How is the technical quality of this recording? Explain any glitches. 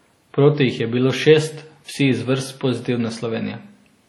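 The recording has heavy lossy-coding damage from start to finish.

The likely cause is low-rate WMA compression, consistent with about 32 kbps. Long transform blocks smear quantisation noise across tens of milliseconds and discard weak spectral lines, so the speech rings and turns washy, a hiss breathes with it, and nothing remains above 19.1 kHz.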